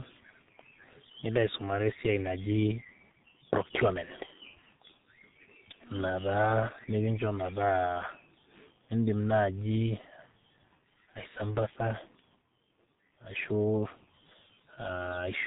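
From start to finish the speech carries heavy G.723.1 codec damage: everything above about 3.8 kHz is simply gone, and the coarse, slow-updating voice model leaves it muffled and hoarse with smeared consonants, which fits a rate of around 6 kbit/s.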